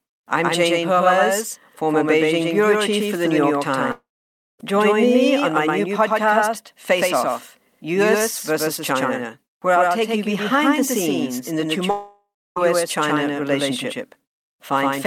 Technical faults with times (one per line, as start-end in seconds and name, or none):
0.00-15.07 doubled audio track
3.91-4.61 long network dropout
11.91-12.58 long network dropout